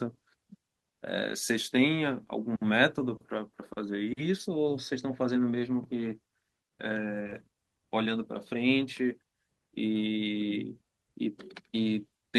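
At 7.23, 7.27 and 7.30 s, short concealed packet loss: three consecutive 20 ms gaps were filled by extending the preceding sound, giving a brief smeared wobble.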